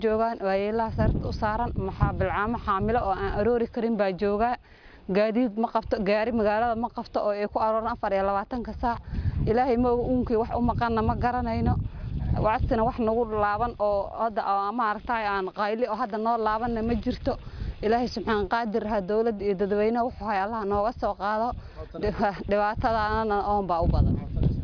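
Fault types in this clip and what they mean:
No faults can be heard anywhere in the clip.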